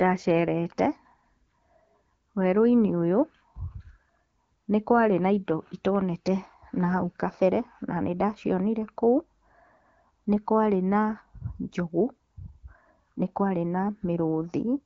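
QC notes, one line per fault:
No faults heard in this clip.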